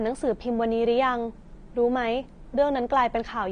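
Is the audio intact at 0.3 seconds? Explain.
No. At 0.3 s the sound is dull and smeared, with nothing above 9.7 kHz, throughout the clip. This is likely AAC compression at a low bitrate near 32 kbps, which drops the highest frequencies.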